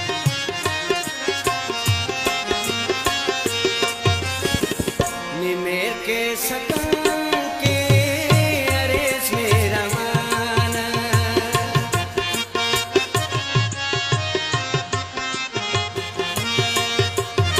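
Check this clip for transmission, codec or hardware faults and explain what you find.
One fault: digital radio blending to analogue, from 13.19 to 16.24 s. The receiver lost the digital stream and cross-faded over 326 ms to the FM broadcast, then back. Level drops about 2 dB, and faint hiss appears.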